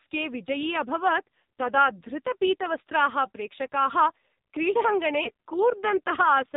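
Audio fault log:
throughout: AMR narrowband mobile codec. The speech is cut off at 4 kHz, so it sounds thin and muffled. The codec rebuilds each 20 ms frame from a vocal tract model driven by a few pulses. Here the damage is heavy. Voiced sounds turn buzzy and synthetic, and the detail between pulses is lost. The coarseness fits one of the lowest AMR-NB modes, around 5.9 kbps. At that rate, fewer bits describe each frame.
5.24–5.30 s: lost AMR speech frames. There is a brief dip and warble lasting about 60 ms. It sounds like a single 20 ms frame failed its checksum. The decoder filled the gap by repeating the last good pitch and vocal tract settings at lower gain. That gives a smeared patch instead of silence. The speech then returns a little weak and rough while the decoder settles.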